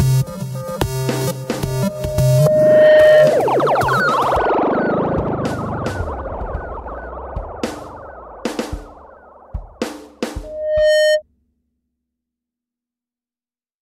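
A microphone is picking up the loudspeaker it feeds, and at 614 Hz the loop gain climbs past one, producing loudspeaker feedback squeal twice. From 1.66 to 3.48 s the tone swells over a second and a half or so to roughly 10 dB above the sound before cutting off. It returns at the same pitch from 10.43 to 11.22 s, building faster, in about half a second, and peaking lower, around 5 dB above.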